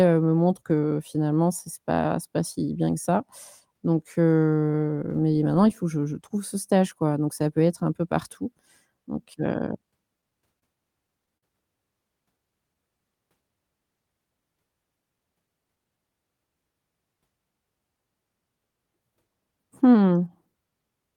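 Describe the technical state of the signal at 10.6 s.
A short stall from a late packet runs from 10.59 to 10.64 s: the jitter buffer emptied, so about 28 ms of speech is stretched, briefly held with a slight buzz or dip, before resuming intact.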